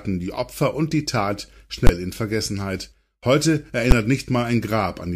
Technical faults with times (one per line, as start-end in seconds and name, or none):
1.87 invalid numbers at full scale
3.91 invalid numbers at full scale